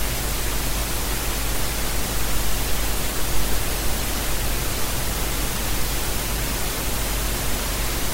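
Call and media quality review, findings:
Plainly audible MP3 compression, whole clip, 0 to 8 s. Watery, swirly texture across these sounds, attacks smeared. Likely an MP3 encode somewhere upstream, and the damage fits roughly a 64 kbps rate. Not enough bits, so the encoder drops weaker frequency lines and they pop in and out frame to frame. Worth finding that encode step.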